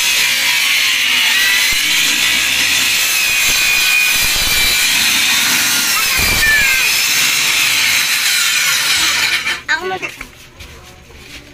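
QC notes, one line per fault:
1.33 s, 6.41 s and 9.96–9.98 s, compressed frames skipped: each time the sound lurches forward with a short smeared blip rather than a sharp click. About 0.4 s of audio goes missing at the first two points and about half a second at the third. Whole blocks of compressed audio were never played, roughly 15, 15 and 20 of them, which fits frames of about 23 ms. Overlapping neighbour frames blur the join into that soft blip.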